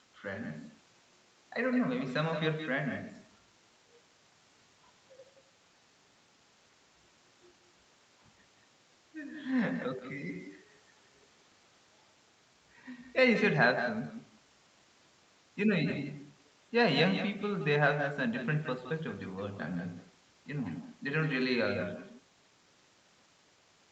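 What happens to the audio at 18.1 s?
At 18.1 s the speech is shadowed by a quieter, thinner copy of itself arriving a fraction of a second later, roughly 150 ms behind and about 9 dB down. This is echo with no canceller, and it runs through the whole clip, not just this moment. The far end is playing the call over a loudspeaker, its microphone picks that playback up, and nothing removes it, so the talker's own voice returns after the network round trip. The whole call also passes through the Opus path, which stops at about 8 kHz.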